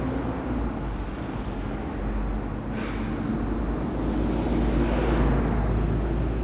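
Nothing here needs flagging: the sound comes through a call line that fits G.711 mu-law at 64 kbps, so there's simply nothing above 4 kHz, which is just how that path carries audio.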